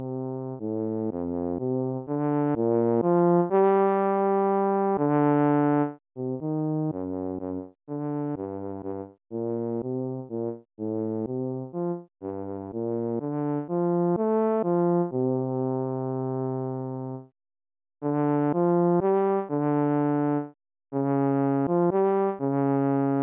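No technical faults can be heard anywhere in the recording.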